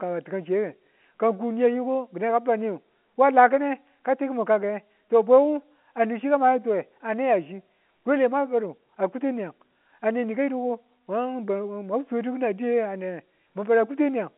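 No technical faults occur in this speech clip, so there are none to describe in time order; it is carried over an ordinary G.711 telephone line, with nothing above about 3.8 kHz.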